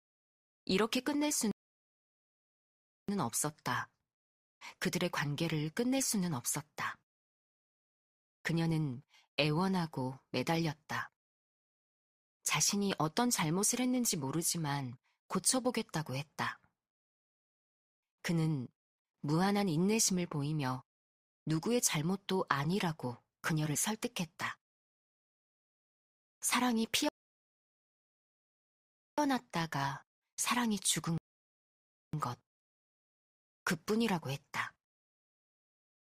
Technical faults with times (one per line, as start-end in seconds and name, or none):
1.51-3.09 rebuffering stall
27.09-29.18 rebuffering stall
31.18-32.13 rebuffering stall